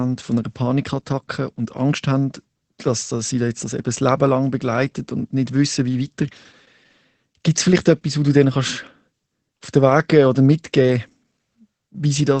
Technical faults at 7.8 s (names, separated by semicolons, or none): Opus voice compression